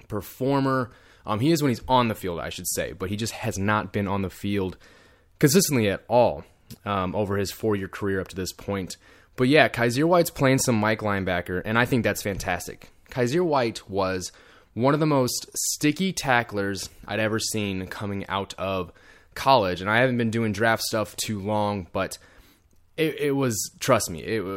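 No technical faults are audible.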